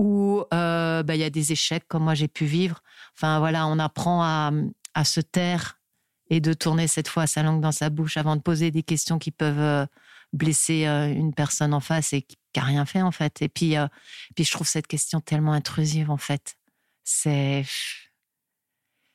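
A recording of speech with no technical fault to point to. There is nothing here that calls for a time stamp or a cause.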